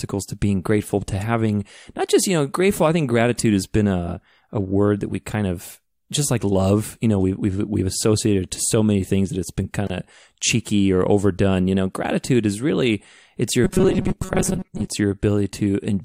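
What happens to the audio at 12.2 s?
Nothing goes wrong at 12.2 s; the speech carries on intact through that moment with no audible fault.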